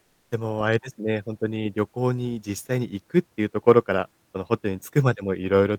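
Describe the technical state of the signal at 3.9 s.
The signal at 3.9 s is intact, with no audible fault at that point.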